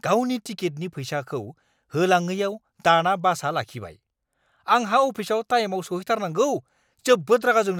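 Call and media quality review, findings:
Nothing stood out on listening to this speech recording, and there is no fault to log against any component.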